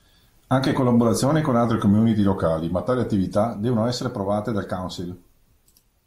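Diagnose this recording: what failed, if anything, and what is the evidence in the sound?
From 1.65 s to 3.36 s the speech slows by about 5.7% and drops roughly a semitone (about 102 cents), then snaps back to normal speed and pitch. On a spectrogram the harmonic stack steps down by about 6% for that stretch and jumps back at 3.36 s, with a clean vertical edge at each end. The waveform looks slightly stretched in time. The stage is the driver or buffer: a drift correction step, likely from clock-matching software lowering the playback rate at once to refill its buffer.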